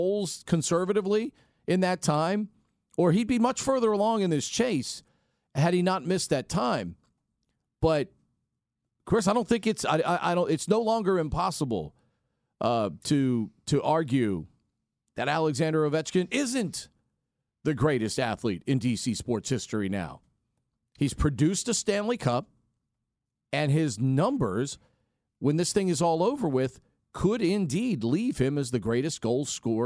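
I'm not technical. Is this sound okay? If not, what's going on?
Yes, nothing in this speech recording stands out as a technical fault, so there's nothing to fix.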